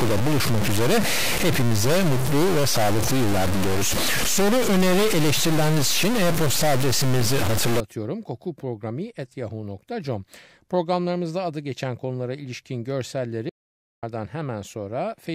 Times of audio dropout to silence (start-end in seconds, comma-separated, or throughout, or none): 13.49-14.03